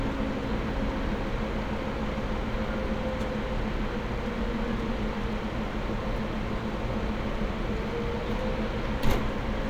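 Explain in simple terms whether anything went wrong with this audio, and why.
Nothing went wrong with this recording of sounds; no technical faults can be heard anywhere in it. The sounds come through with nothing added, cut off or distorted by the equipment.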